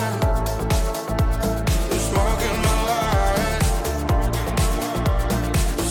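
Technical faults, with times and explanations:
No technical faults detected.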